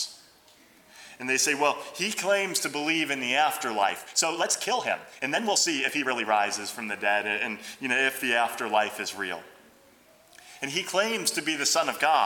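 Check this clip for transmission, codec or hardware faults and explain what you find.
One fault is audible, a time-stretched section from 3.85 to 6.27 s. The pace jumps to about 1.52 times normal while pitch stays put, giving a rushed texture. The likely cause is software compressing that stretch to fit a length, holding pitch by discarding short fragments.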